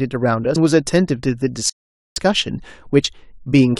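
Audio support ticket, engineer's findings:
Playback stall, 1.70 to 2.16 s. Speech cuts to silence for 467 ms, then resumes. Likely the player starved of data or had its thread blocked.

Compressed frames skipped at 3.04 s. Speech jumps ahead by about two 32 ms frames, some 70 ms lost. Frames missing from the file or refused by the decoder as damaged.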